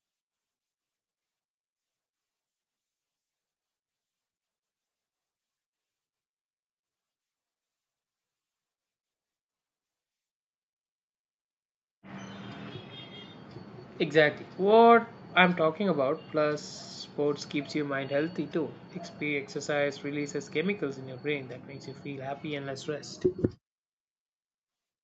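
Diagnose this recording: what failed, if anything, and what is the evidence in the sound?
Nothing failed: the speech has passed through a call's normal microphone processing, with no evidence in the sound of a fault at any stage.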